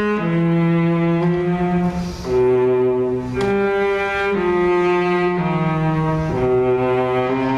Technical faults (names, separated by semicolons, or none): gain pumping